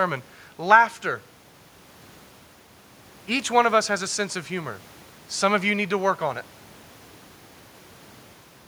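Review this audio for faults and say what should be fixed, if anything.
Nothing needs fixing here.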